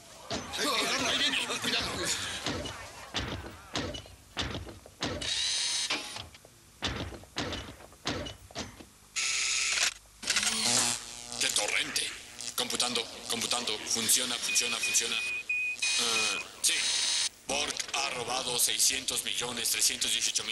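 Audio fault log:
16.77–20.46 s, overlap-add ripple: the audio was split into windowed frames and rebuilt with an overlap whose windows don't sum to a constant gain, so the level swings by about 11 dB once per frame. Because the frames are short, the gain rises and falls around 300 times a second. That is too fast to hear as tremolo, so it comes across as a metallic buzz, with extra tones sitting around the sound.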